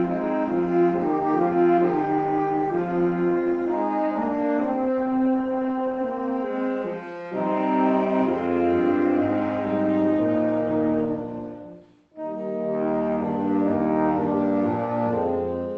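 No technical faults are audible.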